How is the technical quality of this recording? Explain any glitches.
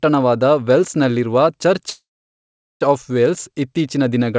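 There's one glitch, a call audio freeze, and the sound carries nothing above 8 kHz, which fits a wideband call codec like G.722. From 1.90 to 2.83 s the audio stalls: a brief fading buzz or hiss, then roughly three-quarters of a second of silence. It's likely a jitter-buffer underrun, and afterward the speech resumes exactly where it stopped, with nothing lost.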